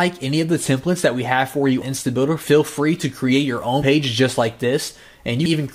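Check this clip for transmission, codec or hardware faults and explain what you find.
One codec fault is present. At 3.81 s, compressed frames are skipped: around seven frames were missing or rejected by the decoder as damaged, so playback leaps forward by roughly 70 ms.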